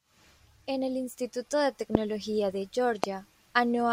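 Loud pops at 1.95 to 1.97 s and 3.04 to 3.06 s, each a single sharp pop peaking roughly 20 dB above the speech, which carries on underneath. Each is likely a brief voltage pulse from a plug, switch, static or driver glitch entering the signal path.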